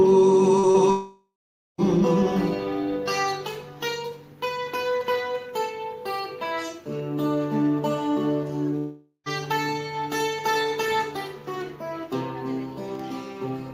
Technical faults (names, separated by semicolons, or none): long network dropout